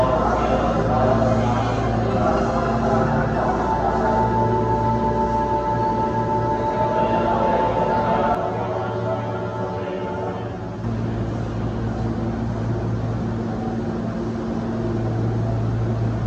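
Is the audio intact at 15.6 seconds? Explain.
Yes, the audio is intact at 15.6 seconds, with no dropout, click, distortion or other fault at that moment.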